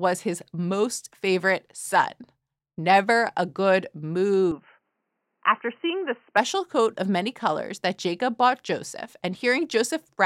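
The recording likely switched its input to a poorer device, probably another microphone or a headset's call profile, from 4.51 s to 6.37 s, with no gap at the change. That device passes nothing above about 3.1 kHz, so the speech turns dull and boxy while its level stays much the same. A faint new noise floor sits far beneath it. The switch comes just before "coat of many colors", and full clarity returns at 6.37 s.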